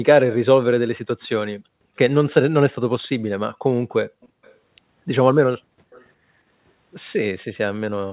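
At 4.21 to 4.55 s and again at 5.92 to 6.05 s, a faint delayed copy of the speech returns about 350 ms late. It sits very low, roughly 30 to 35 dB under the voice. This is an echo leak, likely from a loudspeaker echo canceller letting residue through.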